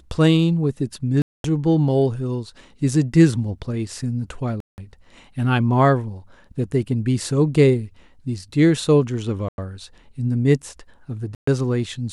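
A likely Bluetooth stall, repeated four times in this speech clip: held-up radio packets starved the headphone buffer, so the speech drops to silence for 223 ms at 1.22–1.45 s, 177 ms at 4.60–4.78 s, 96 ms at 9.49–9.58 s and 125 ms at 11.35–11.48 s before resuming.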